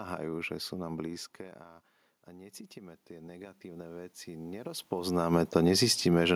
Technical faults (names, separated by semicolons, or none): automatic gain rising